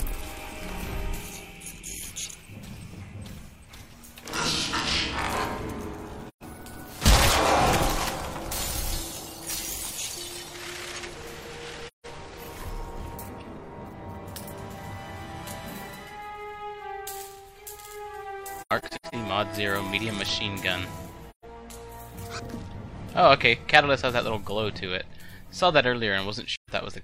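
AAC frame loss with muting leaves soft-edged holes at 6.28–6.43 s, 11.87–12.06 s, 21.30–21.45 s and 26.55–26.70 s. From 18.59 to 19.14 s there are several short gaps, the longest about 100 ms. The decoder zeroed the lost frames, and overlapping windows fade each gap out and back in.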